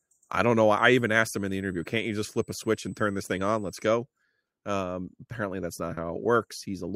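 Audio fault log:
0.78–3.85 s, USB whine: a fixed-pitch whine at 8 kHz sits under the speech, with its strongest component at the 16 kHz harmonic, around 30 dB below the speech level. The 8 kHz fundamental matches the 125 microsecond microframe rate of a high-speed USB bus. The current drawn in each microframe pulses on the power or ground rail and leaks into the analogue path, where it is heard as a thin, steady, high-pitched tone.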